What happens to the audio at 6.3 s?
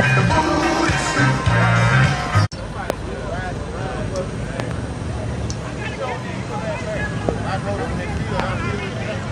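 Nothing goes wrong at 6.3 s; the audio runs through that moment intact, with no dropout, click, distortion or other fault.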